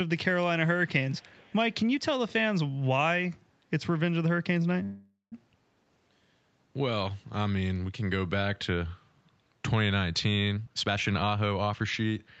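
From 1.08 to 1.74 s a faint delayed copy of the speech trails about 445 ms behind, an echo leak, likely from a far-end canceller letting loudspeaker pickup through.

At 4.83 to 5.34 s a call audio freeze stretches the last sound into a fading buzz, including 170 ms of silence, likely from late packets; speech resumes with nothing lost.

From 10.55 to 12.11 s a jitter buffer speed-up trims short pitch-period pieces, about half a second in total, so speech runs at 131% speed with unchanged pitch.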